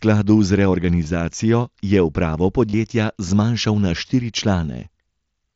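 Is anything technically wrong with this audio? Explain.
Yes, there is concealed Bluetooth headset packet loss on this mSBC headset link. There is a brief patch at 1.04 s, and a longer one from 2.70 to 2.74 s, between "je upravo" and "zmanjšal na štiri". Voice packets were lost and the receiver filled each gap by repeating the best-matching recent stretch of waveform. The first, about two lost frames, and the second, which fits about four lost frames, each give a short buzzy held tone with a slight warble as real sound resumes. On a waveform this shows as a near-periodic copied segment at unchanged level. On a spectrogram it appears as flat, smeared harmonic bands.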